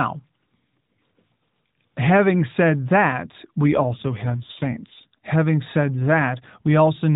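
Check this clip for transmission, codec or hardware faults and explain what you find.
One transmission fault appears, in speech carried over a narrowband AMR mobile codec whose band stops at 4 kHz.

From 3.65 to 5.19 s the voice turns rougher, buzzier and more synthetic, with no gap and no change in bandwidth. This is an AMR rate drop. The degradation fits the link falling from 12.2 to about 5.9 kbps and spending the freed bits on error protection.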